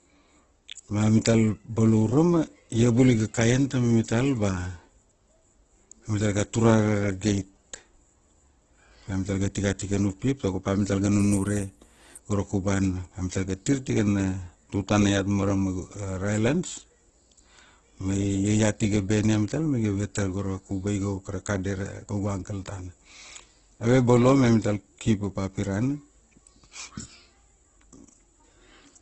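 From start to finish the speech carries heavy damage from what is likely Opus compression in its music (CELT) mode, at a rate that points to roughly 12 kbps. With too few bits, band energies survive but their fine detail is replaced by folded or noise-filled content, so the sound turns rough, grainy and hissy rather than swirly. A spectrogram shows a hard ceiling at 12 kHz and smeared, noise-textured bands with few empty holes.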